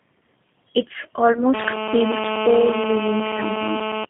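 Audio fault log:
throughout: G.729 codec. Rough, slightly synthetic speech confined to about 150 Hz to 3.5 kHz, which fits an 8 kbit/s frame-based model rebuilding each frame from pulses.
1.33 to 1.43 s: VoIP packet loss concealed by the speech codec. A brief buzzy smear and then weak sound as the decoder extrapolates over what sounds like two missing 10 ms frames.
1.54 to 4.05 s: GSM phone buzz. A hard, raspy 217 Hz buzz full of harmonics, steady and about 4 dB below the speech, as in-call radio bursts are rectified.
3.37 to 3.41 s: VoIP packet loss concealed by the speech codec. A shorter buzzy patch and dip that fits one lost 10 ms frame, filled in from the previous pitch and filter.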